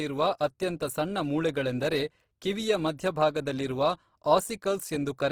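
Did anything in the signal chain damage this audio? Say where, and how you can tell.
Yes. Opus compression runs throughout the clip, at the codec stage. The speech sounds rough and grainy rather than swirly, yet content still reaches 20.3 kHz. That fits Opus's CELT mode, likely starved near 16 kbps and filling under-funded bands with folded or noise-like energy.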